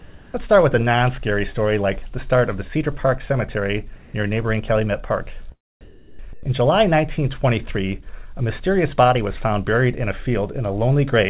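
Sound dropped by the voice detector, likely, at 0.00–0.34 s, 3.96–4.14 s, 5.81–6.19 s and 6.33–6.43 s: the audio gives way to flat, steady comfort noise, as if the sender judged the material to be background and stopped transmitting. The gaps run 340, 180, 380 and 100 ms. Sound resumes once detection re-triggers. Through the narrowband call path, with nothing above 4 kHz, the noise fill sounds dull.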